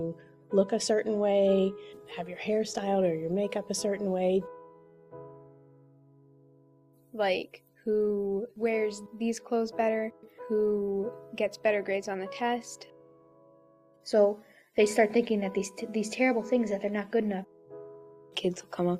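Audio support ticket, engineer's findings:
No audible faults found; no defect identified, no further action required on this ticket.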